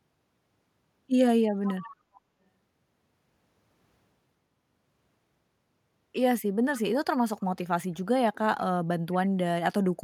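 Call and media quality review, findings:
Echo leak, four scraps: 1.65–1.96 s (strongest, roughly 15 dB under the talker), 2.15–2.2 s and 7.4–7.44 s (faint, around 30 dB down), 9.12–9.29 s (about 25 dB down). A delayed copy of the speech arrives 467 ms late. Likely far-end echo canceller leaving loudspeaker pickup in the return path. A fixed half-second lag and chopped fragments rule out room reverb, which smears continuously from zero delay.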